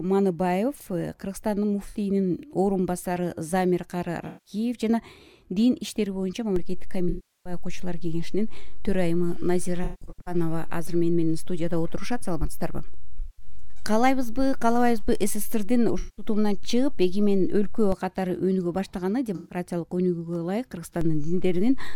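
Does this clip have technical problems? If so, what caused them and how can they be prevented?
Yes. The clip has AAC frame loss with concealment and DC steps.

AAC frame loss with concealment is heard as brief smeared, noisy or phasey patches at 1.88 s, 4.27 s, 7.09 s, 9.84 s, 13.19 s, 15.99 s and 19.35 s. They last from 64 ms up to 363 ms. At 9.84 s the gaps are scattered over about 430 ms, the longest run roughly 150 ms. The decoder lost compressed frames and filled the holes by reusing the last good spectrum, so the detail there is synthetic rather than real. The lengths come in steps of about 21 ms, which fits 1024-sample AAC frames at 48 kHz. Sending the stream over a reliable or error-protected path, with enough jitter buffering to ride out network delays, would prevent this.

The DC step shows up as a low thump at 6.56 s while the sound carries on unchanged. Another thump follows at 17.92 s when the offset steps back. 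A further step at 21.01 s holds to the end of the clip. The waveform's zero line jumped to a new offset, as happens when a converter recalibrates or an input carrying a DC offset is switched in. Using DC-blocking high-pass filtering and avoiding switching inputs or recalibrating during capture would prevent it.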